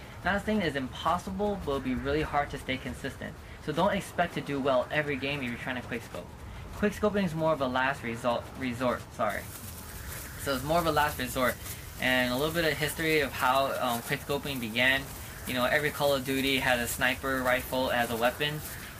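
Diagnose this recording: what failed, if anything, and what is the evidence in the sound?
From 9.3 s onward the sound turns thin, bright and sibilant: pre-emphasis left on, its matching playback de-emphasis skipped, lifting 10 kHz about 14 dB, consistent with 75 µs FM.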